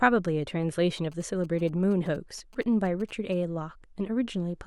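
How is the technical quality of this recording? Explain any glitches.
The speech is marred by GSM signalling bursts from about 0.97 s to 3.34 s: a galloping dit-dit-dit of brief 217 Hz buzzes, sitting about 25 dB beneath the speech. A nearby 2G phone exchanging short radio bursts with its network induces the interference, and the audio circuitry rectifies it into audible pulses. Unlike steady mains hum, the buzz comes in intermittent clusters rather than a continuous tone.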